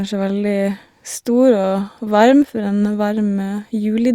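Speech recording with no audible technical faults.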